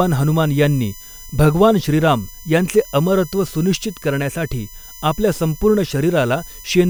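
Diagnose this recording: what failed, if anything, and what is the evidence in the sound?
A steady high whine sits under the speech throughout, about 25 dB down, built on 1 kHz and peaking at 6 kHz: USB whine, bus frame current leaking into the analogue ground.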